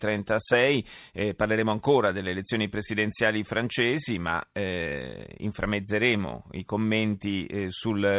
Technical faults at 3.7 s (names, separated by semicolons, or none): none